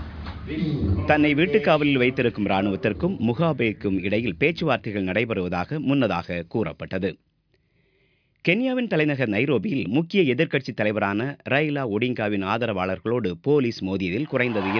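No technical faults can be heard anywhere in the clip.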